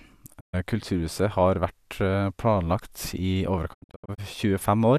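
At 0.39 s the speech fades out over about 20 ms into a digital broadcast dropout: the receiver stopped getting usable frames and muted. The gap lasts until 0.55 s, and whatever was sent meanwhile is lost. A second dropout, from 3.73 to 4.20 s, breaks into several short holes, the longest 72 ms. On a waveform these are flat silent stretches with brief ramps at their edges. A spectrogram shows clean vertical blank bands.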